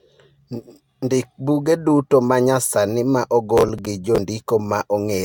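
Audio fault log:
throughout: generation loss, likely from several passes through AAC-LC around 96 kbit/s; smeared, swirly, hollow speech with blurred attacks and nothing above 17 kHz.
3.58–4.18 s: processor overload crackle; around ten missed deadlines on buffers of about 10 ms replay stale audio with hard edges, giving gritty tearing over the speech.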